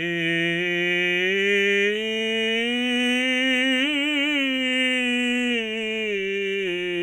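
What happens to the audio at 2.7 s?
Nothing goes wrong at 2.7 s: the music plays straight through that moment with no dropout, click, glitch or other fault.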